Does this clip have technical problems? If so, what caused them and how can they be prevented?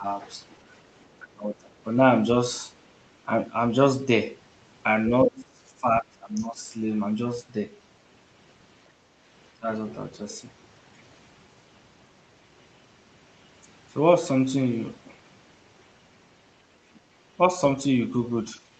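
Yes. Speech suppressed in double talk pulls the voice down by about 10 to 20 dB at 0.00 to 0.06 s, 1.23 to 1.85 s, 5.09 to 6.69 s and 9.59 to 9.68 s. It is likely an echo canceller ducking the talker while the far end also spoke. A full-duplex echo canceller with better double-talk detection would prevent it.

The other side's voice leaking through is faint, about 30 dB below the talker, at 1.00 to 1.22 s. This is likely residual loudspeaker echo that the canceller left in the microphone signal. It is a separate second voice rather than a smeared copy of the talker, so it is not reverberation. A headset, or a lower loudspeaker volume, would stop the echo from reaching the microphone.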